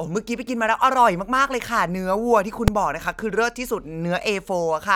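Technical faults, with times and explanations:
2.68 s, invalid numbers at full scale: the speech is broken by a single harsh bang, about 3 ms long. A calculation produced infinite or invalid values, and the output was driven to its largest possible value for one processing block, which fits a 128-sample block. Because the block is so short, the jumps onto and off the extreme value merge into one bang. An ordinary click or dropout sits at the level of the surrounding speech; this one sits flat at one extreme value, far beyond the speech peaks.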